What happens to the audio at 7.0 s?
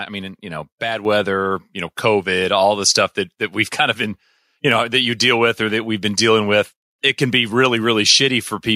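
Nothing goes wrong at 7.0 s: the speech carries on intact through that moment, with no dropout, click, distortion or other audible fault.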